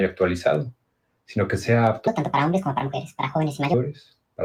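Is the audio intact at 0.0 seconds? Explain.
No. From the very start at 0.0 s, and continuing for the whole clip, the sound pumps and thins: onsets come through, but anything sustained, along with the decaying tails and ambience, sinks by around 10 dB, so the level flutters rather than holding steady. This is a noise suppressor applied to music or sounds. A suppressor tuned for speech treats steady tonal content and reverb as background noise and keeps pulling it down.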